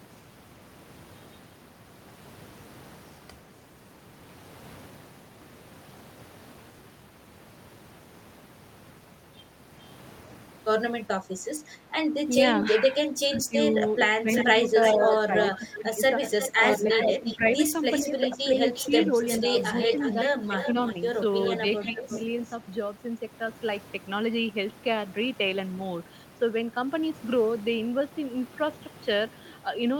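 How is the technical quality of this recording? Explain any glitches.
The recording has call-processing trouble in its middle third, from about 12.7 s to 22.5 s: the talker's speech is pushed down in places, and a delayed copy of the voice comes back.

Speech suppressed in double talk occurs at 12.72 to 17.45 s, 18.04 to 19.51 s, 20.13 to 20.75 s and 21.92 to 22.05 s. The speech sinks in level, by up to about 15 dB in the first and last spans and about 5 dB in the other two. It adds up to roughly two seconds in the first span and only fractions of a second afterwards. The likely cause is an echo canceller that couldn't separate the talker from loudspeaker echo when both sides were active, so it turned everything down. Unlike a simple level fade, these dips are patchy and come and go with the overlap.

An echo leak is heard from 14.34 to 17.38 s and again from 17.91 to 22.53 s. A copy of the speech returns 354 ms late, at about 5 dB below the speech in the first stretch and about 10 dB below in the second. 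It is likely one side's microphone picking up its own loudspeaker, with the canceller letting part of that through. What sets it apart from room reverberation is the single, clearly separated repeat at a fixed delay, rather than a smooth decaying tail.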